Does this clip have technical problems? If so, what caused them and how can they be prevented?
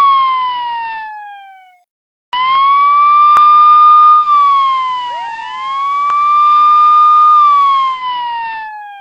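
Yes. From 4.12 s to 8.09 s there is digital radio blending to analogue. The receiver lost the digital stream and cross-faded over about 217 ms to the station's FM broadcast, then faded back. On a spectrogram, a faint broadband hiss floor, roughly 40 dB down, fills in for that stretch. The waveform envelope drops by about 2 dB. Improving antenna placement or signal strength keeps the digital stream locked, preventing the fallback.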